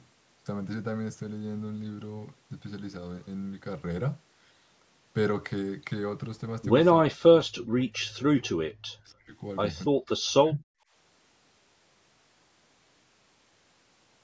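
From 7.12 to 9.4 s and again from 9.89 to 10.65 s, the speech drops sharply, by about 40 dB at its deepest. This is speech suppressed in double talk, likely an echo canceller mistaking the near talker for loudspeaker echo and attenuating both.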